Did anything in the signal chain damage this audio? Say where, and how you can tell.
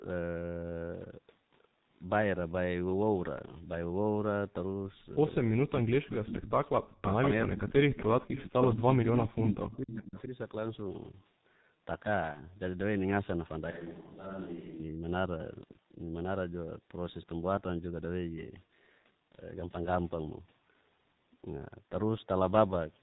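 Yes. At the codec stage, the whole clip is band-limited to about 4 kHz, muffled and hoarse, with smeared consonants. This is G.723.1 coding at 6.3 kbit/s with heavy damage. Its slow 30 ms frame updates blur transitions, which a plain low-pass filter would not do.

In call processing, an echo leak returns a delayed copy of the speech from 6.32 to 7.31 s at a 0.42 s delay and about 5 dB down. It recurs at 7.91–8.65, 9.07–9.18 and 9.73–10.22 s at 0.47 s and about 10 to 20 dB down. A delayed copy of a single voice points to a likely incomplete echo canceller rather than room reverberation.

Also in call processing, speech suppressed in double talk dips the level by roughly 40 dB between 6.93 and 7.74 s, over around half a second in total. This overlaps the echo. It likely comes from the canceller turning down both its own talker and the loudspeaker echo when the two overlapped.

At the network stage, VoIP packet loss concealed by the speech codec appears at 12.32–12.41 s. 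About 30 ms of audio, which fits a single lost frame, is replaced by a fading extrapolation, and the speech stays weak briefly afterwards. That distinguishes it from a clean dropout of silence.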